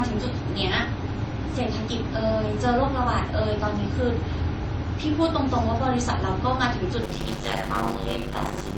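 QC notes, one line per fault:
throughout, transcoding between lossy codecs: the speech carries two different kinds of coding artefact heard together. This points to a low-rate MP3 pass, around 32 kbit/s, likely followed by a Vorbis encode near 40 kbit/s that spent its bits re-coding the first codec's artefacts. The stacked, mismatched artefact types set it apart from a single low-bitrate encode.
7.02 to 8.78 s, block size mismatch (padded): from here to the end of the clip a steady 100 Hz buzz sits under the speech, and delivery slows to about 0.53 times normal speed while the timbre stays. Each block is only partly filled with audio and the rest with silence, which fits 256-sample blocks being read by a stage expecting larger ones. The regular silent gaps make the buzz. Unchanged timbre and the lengthened timing separate it from a sample-rate mismatch, which would lower the pitch of everything.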